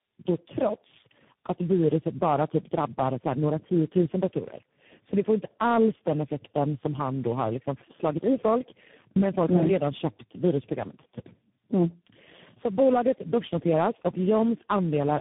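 Tandem speech coding runs throughout. The speech seems to pass four speech codecs in a row, likely ending in CVSD, each recoding the last's damage. It sounds rough, muffled and warbly, with nothing above 3.8 kHz.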